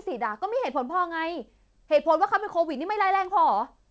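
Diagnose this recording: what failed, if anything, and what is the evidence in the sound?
Nothing stood out on listening to this speech; its top end stops at about 8 kHz, which fits a wideband call path such as G.722 at 64 kbps.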